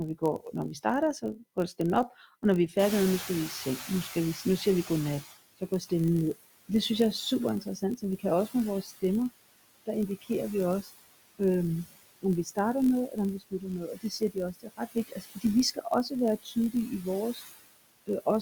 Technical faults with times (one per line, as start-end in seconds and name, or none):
0.00-18.41 USB whine
0.00-18.41 noise suppressor artifacts
0.00-18.41 block size mismatch (padded)
0.19-1.79 speech cut by the noise suppressor
2.78-5.34 noise suppressor catching up
4.65-5.92 speech cut by the noise suppressor
7.61-9.03 speech cut by the noise suppressor
9.86-11.40 speech cut by the noise suppressor
12.22-17.42 speech cut by the noise suppressor